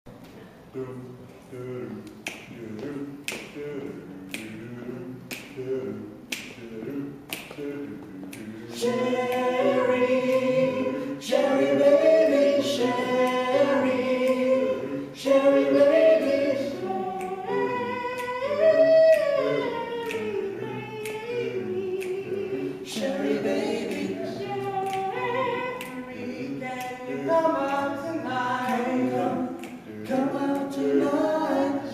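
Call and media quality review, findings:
No audible defects found on review; nothing to report against the media path.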